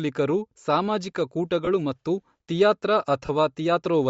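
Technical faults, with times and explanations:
throughout, Bluetooth LC3 compression: a breathy, grainy top on the speech, likely LC3 at a low bitrate zeroing upper bands and filling them with noise.
1.65–1.68 s and 3.26–3.30 s, lost LE Audio frames: brief noisy smears of about 20 and 30 ms, where the decoder replayed the last spectrum with randomised signs.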